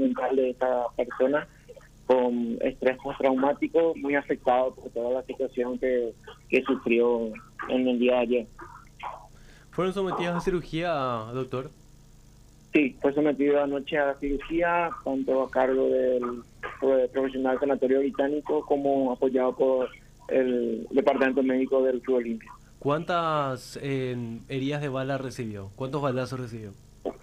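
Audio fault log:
No faults detected in this recording.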